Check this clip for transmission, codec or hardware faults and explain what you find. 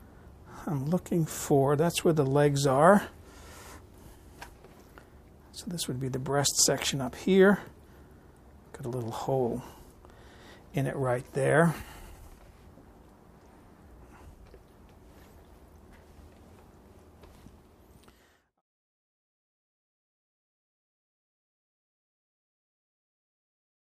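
Nothing stood out on listening, apart from a smooth fade-out, as an editor would apply, that begins around 17.5 s and reaches its end at 18.62 s.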